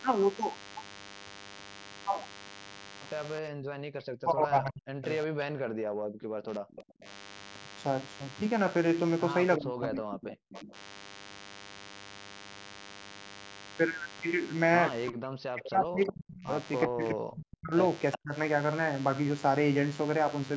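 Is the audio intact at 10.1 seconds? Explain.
No. From 9.57 to 10.75 s the speech sinks by around 40 dB at its deepest. This is likely speech suppressed in double talk: with both sides talking, the echo canceller mistook the near talker for loudspeaker echo and attenuated it.

A DECT cordless phone buzz is also present at 10.1 s and throughout. A nearby handset or base transmits bursts every 10 ms that the audio circuitry rectifies, producing a thin 100 Hz buzz with many harmonics, about 20 dB below the speech.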